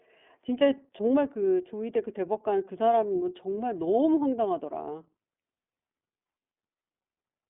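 Throughout, the speech carries plainly audible iLBC codec damage. Nothing passes above 3.8 kHz. Each 30 ms frame is coded separately, leaving a rough, synthetic edge.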